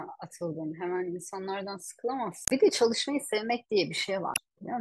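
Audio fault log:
2.44–2.52 s and 4.33–4.38 s, damaged data in a compressed stream: two short garbled blips cut into the speech, about 80 ms and then about 50 ms long. A stretch of the compressed data got corrupted, so the decoder misread those frames, lost its footing in the stream, and had to hunt for the next valid frame header before it could carry on. What you hear in those gaps is the decoder stumbling over bad data as it resyncs.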